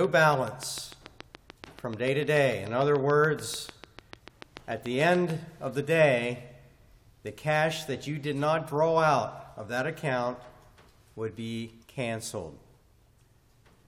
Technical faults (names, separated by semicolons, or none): train of clicks